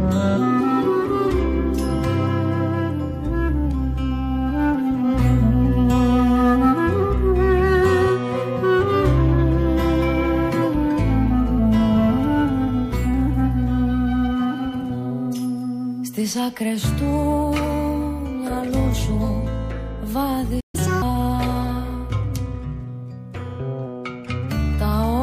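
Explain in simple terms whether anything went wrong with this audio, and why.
Two related things went wrong near the end. First, a playback stall: the player most likely ran short of incoming data, or was briefly held up, so it had nothing to send to the speakers. You hear the sound cut out mid-flow at 20.60 seconds and stay silent for about 0.13 seconds, until 20.75 seconds, when it picks up again.

Then came catch-up at higher speed. Having fallen behind during the stall, the player tried to win back the lost time by playing its backlog faster than normal. From 20.75 to 21.02 seconds the audio runs at 1.5 times normal speed, and because speeding it up this way also raises the pitch, it sounds higher by roughly seven semitones, a bit like a chipmunk effect, before dropping back to normal.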